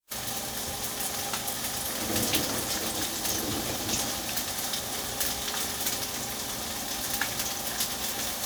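No technical faults are audible anywhere in the recording.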